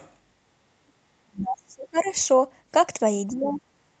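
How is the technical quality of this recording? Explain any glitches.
The recording has two recurring call-path glitches, both brief disturbances in the speech. Its top end stops around 8 kHz, as the call path would suggest.

Other side's voice leaking through at 0.0–0.11 s, 1.97–2.1 s and 3.44–3.61 s: faint second speech, roughly 20–35 dB down, likely loudspeaker echo the canceller missed.

Speech suppressed in double talk at 1.24–2.08 s and 3.27–3.61 s: the voice dips sharply, up to about 35 dB, likely the canceller ducking both sides during overlap.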